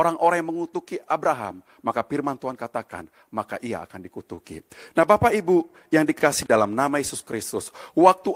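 At 4.35 to 4.40 s, just after "katakan maka ia akan", there is a short stall from a late packet. The jitter buffer ran dry, so the last sound is held for about 23 ms, with a slight buzz or dip. Speech resumes where it stopped, with nothing lost and playback 23 ms later from then on.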